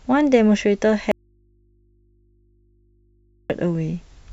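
Signal feed likely broken while the path downstream stayed live, an audio dropout to a faint residue from 1.12 to 3.50 s. The speech cuts off abruptly for 2.38 s, leaving only mains hum roughly 40 dB below the voice, then snaps back.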